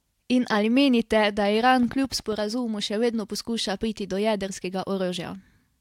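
A train of clicks runs from 1.83 to 2.33 s, ending just before "še vedno poskuša priti". About seven sharp, similar pulses arrive at an uneven pace averaging 10.1 per second, each peaking roughly as loud as the speech itself, heard as popping over the sound. Repeated pulses of this kind likely come from electrical interference or a faulty connection or power supply injecting spikes into the signal path.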